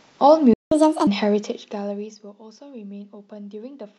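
At 0.53 s the player likely ran dry of buffered data or had its output thread blocked, and nothing reached the output until it recovered at 0.72 s. That is a playback stall of 177 ms. The speech cuts out abruptly in mid-flow, leaving a short, distinct hole of silence before the sound resumes, rather than a gentle pause of the kind a talker would make.

From 0.72 s to 1.07 s the player works off the backlog the stall left behind by resampling it at 1.5 times normal speed. This catch-up at higher speed raises speed and pitch together, so for about a third of a second the speech sounds hurried and lifted by roughly seven semitones, a chipmunk-like shift.

Between 1.22 s and 2.32 s the level is pulled down by around 20 dB, but the gain is applied in discrete jumps, a couple of hundred times a second, with no smoothing between them. Each jump puts a small discontinuity into the waveform. Together they produce zipper noise, a fine buzzing tick that rides on top of the speech for as long as the level is falling.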